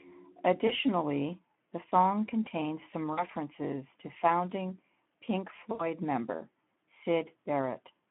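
Throughout, the speech passes through the Speex codec at a low setting, consistent with roughly 11 kbps, over a 150 Hz to 3.4 kHz line, leaving it plainly hoarse and noisy.

At 0.67–0.72 s, 3.13–3.23 s and 5.71–5.85 s, VoIP packet loss concealed by the speech codec fills gaps of about 20, 40 and 80 ms with fading extrapolation that stays weak briefly afterward.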